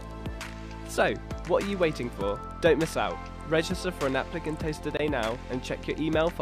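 At 4.97 to 5.00 s there is a gap between stream segments: two segments' timestamps leave roughly 23 ms uncovered, and the player fills it with silence. Nothing is lost, but the sound stops abruptly. A waveform shows a flat, hard-edged hole; a spectrogram shows a thin, clean vertical blank.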